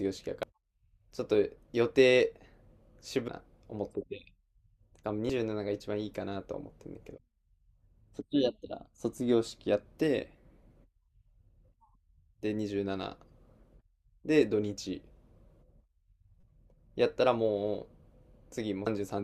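Damaged data in a compressed stream causes brief blips at 0.43, 3.28, 5.30, 16.41 to 16.44 and 18.86 s. Corrupted frames make the decoder misread them and lose sync.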